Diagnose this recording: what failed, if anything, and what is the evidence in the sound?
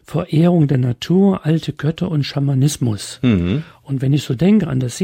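Nothing failed, and the sound carries no evidence of a fault at any stage of the chain.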